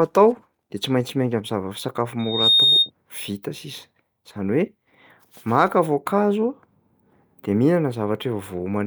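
From 2.19 s to 2.90 s a single piercing tone near 3.7 kHz swells out of the speech over roughly a third of a second and settles a few decibels above it before cutting away. This is loudspeaker feedback squeal: the microphone was picking up the loudspeaker it was feeding, and around 3.7 kHz the loop gain climbed past unity, so that one frequency kept reinforcing itself until the loop was broken.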